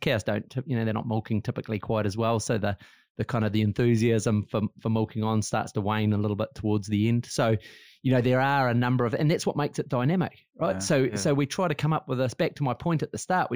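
Throughout the speech, imaging from linear upsampling is present. The rate was raised from 16 kHz to 44.1 kHz by straight-line interpolation, which dulls the top of the band and leaves a faint mirrored copy between 8 kHz and 16 kHz, roughly 30 dB down, heard as a light metallic shimmer on sibilants.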